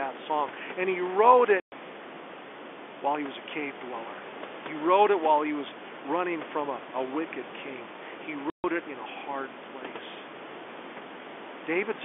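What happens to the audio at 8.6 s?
The sound drops out completely from 8.5 to 8.64 s, just before "it in a hard". That's packet loss filled with silence: about 140 ms of lost packets replaced by dead air, with hard edges.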